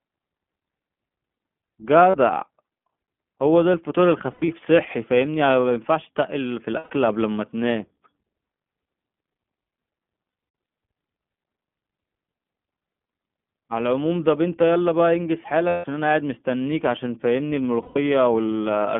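Throughout, the speech carries the plainly audible sound of the iLBC codec. Nothing passes above 3.4 kHz or below 150 Hz, so it has a narrow telephone-line quality. The codec codes each 20 ms frame's excitation on its own, which leaves the voice clear but slightly rough and synthetic. That character fits iLBC's 15.2 kbps mode.

At 2.10 s the first lost iLBC frames occur, a 40 ms gap, which fits two dropped 20 ms frames. At 4.32 s about 120 ms goes missing, scattered across 160 ms with the longest run around 100 ms. Further losses follow at 6.78 s (120 ms), 10.30 s (180 ms spread over 240 ms, longest run around 100 ms), 15.68 s (160 ms) and 17.82 s (140 ms). In each gap the decoder repeats the last pitch cycle mixed with noise, so the sound becomes a held, faintly buzzy vowel that fades over the longer losses. Because each frame is decoded independently, the speech recovers almost immediately once packets resume.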